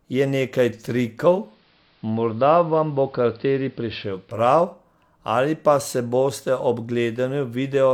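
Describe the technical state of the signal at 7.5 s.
At 7.5 s the signal is intact, with no audible fault at that point in the speech.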